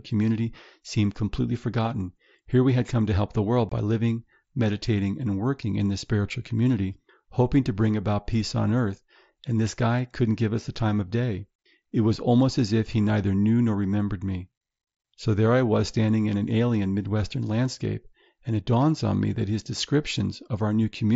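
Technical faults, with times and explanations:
3.69–3.72 s, unconcealed Bluetooth headset packet loss: a short run of voice packets between headset and phone never arrived, and nothing was done to fill the gap, so silence or an idle pattern stands in for them. Between "to help the world" and "by living meditating and" the speech drops out for roughly 25 ms with abrupt edges, a hole that fits about three lost headset frames, in the wideband mSBC link's otherwise lightly grainy signal.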